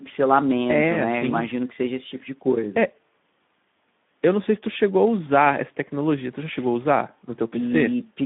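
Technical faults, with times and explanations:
Throughout, Speex codec: the speech sounds noisy and hoarse, with the grain of a starved CELP excitation, which fits a low setting near 11 kbps. The band runs only from about 150 Hz to 3.6 kHz, giving a narrowband telephone character.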